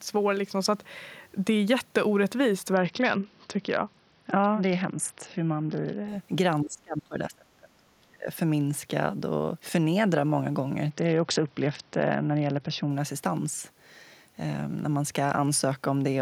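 From 2.73 to 6.08 s the speech turns dull and gritty. This is a Bluetooth SBC bit pool drop. The link starved the top sub-bands and quantised the rest coarsely. The sound fits a bit pool falling from 31 to 7, near 61 kbps.

From 6.62 to 8.28 s the speech dips by about 30 dB and breaks up for around a second and a half. This is speech suppressed in double talk. An echo canceller likely turned the talker down along with the far-end echo.

From 10.90 to 12.90 s the same bit pool drop returns. The treble dulls and grit rises again until the rate recovers.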